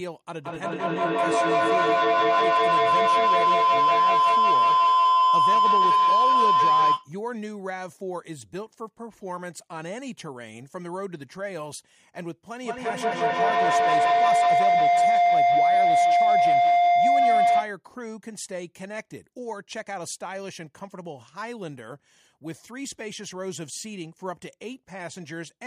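Feedback howl from 0.34 to 7.13 s, and again from 12.63 to 17.79 s: two devices share the call in one room, so each pass through microphone and loudspeaker adds level. The repeats grow into a tone near 1 kHz, then near 700 Hz, pulsing about every fifth of a second and peaking about 13 dB above the speech.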